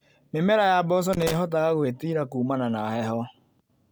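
A worn or dirty contact making and breaking from about 1.13 to 1.36 s, just after "ya mboco", causes loose connector crackle: the speech is chopped into irregular scratchy bursts.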